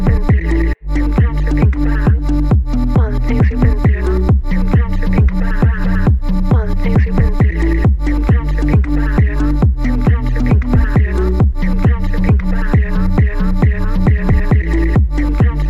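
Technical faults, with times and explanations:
No technical faults can be heard anywhere in the clip. Nothing in the audio calls for a time or an explanation.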